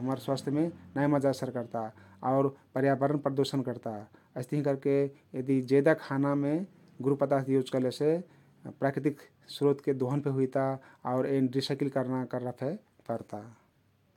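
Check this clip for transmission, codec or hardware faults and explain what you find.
Nothing here stands out as a transmission, codec or hardware problem; the speech comes across steady and intact the whole way, with nothing that needs flagging.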